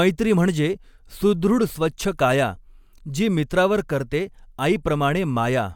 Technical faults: none

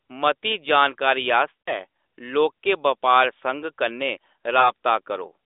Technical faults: lost AMR speech frames

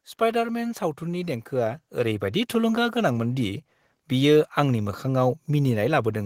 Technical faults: automatic gain rising

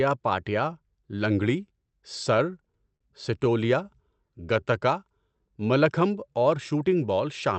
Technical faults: repeated stalls (stutter); jitter buffer slow-down

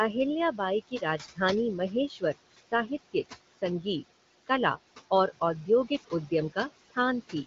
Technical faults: noise suppressor artifacts; speech cut by the noise suppressor

